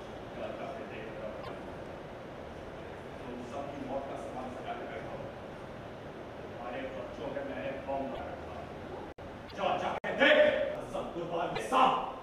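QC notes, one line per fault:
9.12–9.18 s and 9.98–10.04 s: block of digital silence. Two 60 ms holes, where the sound cut out abruptly with no fade, as when the output buffer goes unfilled.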